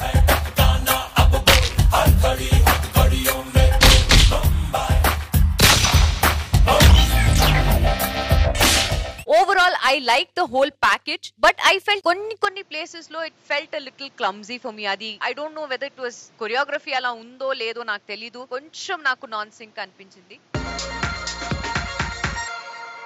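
From 12.45 s the sound dulls with nothing above 7.6 kHz, drops about 10 dB and adds noise: likely an input switched to a poorer device.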